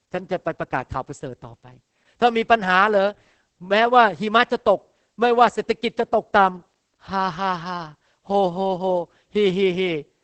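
A speech recording carrying heavy Opus voice compression from start to finish. The top of the band stops at 8 kHz, so consonants lose their crispness and the sound is muffled. The voice turns hoarse and slightly robotic. That comes from the SILK linear-prediction coder quantising the excitation very coarsely. The degree of damage points to a bitrate around 10 kbps. The texture fits SILK working in 20 ms frames.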